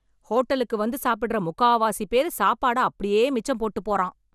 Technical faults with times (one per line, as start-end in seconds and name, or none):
0.00-4.34 generation loss